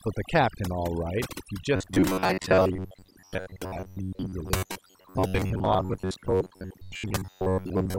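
Speech, with overdone noise removal across the whole clip. The suppression is pushed so hard that any frequency band close to the background level gets pulled down or cut entirely, taking the quieter parts of the voice along with the noise. What remains is near-silent gaps sprinkled with twinkling specks. On a spectrogram the pauses show as black with isolated bright dots, and the speech looks patchy and ragged at its edges, with weak harmonics and consonant energy missing in blocks. From 1.76 s to the end at 7.99 s, the voice turns into robotic sound, most likely from repeated short buffers. Most of the audio in that stretch, around two thirds or more, is a loop of the last few milliseconds replayed while new material is skipped. This imposes a fixed buzz at about 93.8 Hz, which fits a repeat length near 10.7 ms. The buzz still roughly tracks the speech. A waveform would show identical short cycles tiling the signal, and a spectrogram would show rigid, evenly spaced horizontal lines at 93.8 Hz and its multiples.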